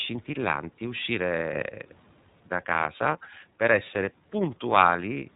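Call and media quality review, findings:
iLBC codec on the media path: narrowband coding in independent 30 ms frames, nothing above about 3.8 kHz. Speech sounds band-limited, slightly rough and synthetic throughout, with plainly audible codec damage; the frame length points to the 13.33 kbps mode.

Sudden gain jump, 1.54 to 1.62 s: digital gain likely stepped without a ramp, probably a level setting or bit shift applied mid-stream. Speech and background noise jump together by about 6 dB, abruptly, for this short stretch.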